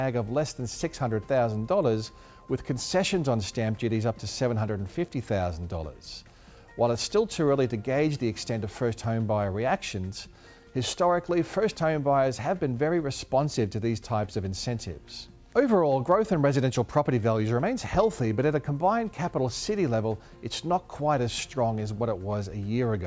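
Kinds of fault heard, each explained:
Nothing stood out on listening; no fault could be heard anywhere in the audio.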